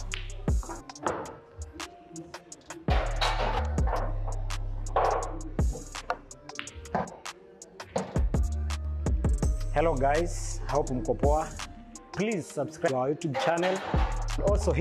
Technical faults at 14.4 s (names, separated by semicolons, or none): compressed frames skipped